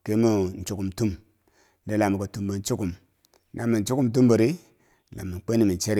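No technical faults can be heard anywhere in the speech recording. There is nothing in it to mark with a time or explain.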